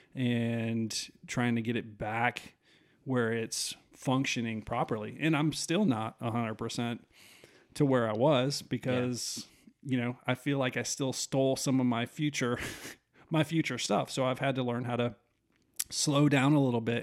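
No technical faults can be heard anywhere in this speech recording. There is nothing here that needs a time or a value marked against it.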